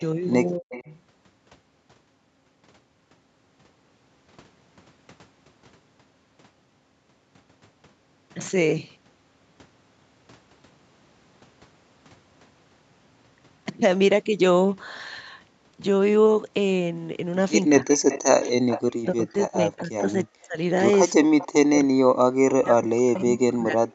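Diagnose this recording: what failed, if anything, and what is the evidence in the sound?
The speech dips and drops out in pieces at 0.58–0.88 s, briefly at 17.79–17.87 s, through 18.79–20.58 s, and from 21.13 s to the end, falling by up to about 40 dB. This is likely speech suppressed in double talk: call processing attenuated the near talker while the far side was active.

A faint delayed copy of the speech trails behind at 0.71–0.93 s and 21.39–21.47 s, about 20 dB down, and more strongly at 17.89–19.05 s, about 10 dB down, lagging by 305–335 ms. This is likely echo leak, where the canceller left loudspeaker pickup in the returned signal.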